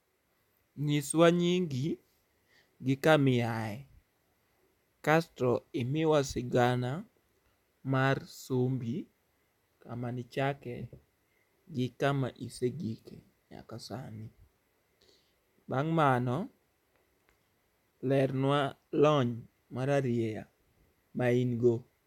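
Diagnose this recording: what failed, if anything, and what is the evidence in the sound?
Nothing failed; no stage shows any audible fault.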